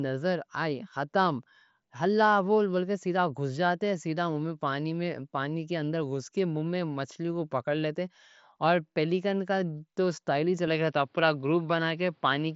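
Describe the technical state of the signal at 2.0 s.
At 2.0 s the signal is intact, with the speech passing through the Bluetooth mSBC headset codec as expected and nothing heard above about 7.7 kHz.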